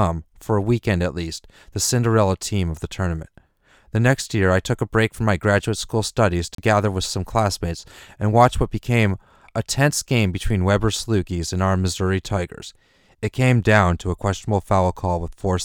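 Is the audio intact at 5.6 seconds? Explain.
No. A block of digital silence sits at 5.59 s, between "a break from my" and "school studies". For about 4.7 ms the signal is replaced by zeros, with no fade in or out, so the waveform drops abruptly to silence and jumps straight back. Each hard edge produces a discontinuity, and because the gap is so brief it is heard as a tick or dip rather than an audible hole in the speech.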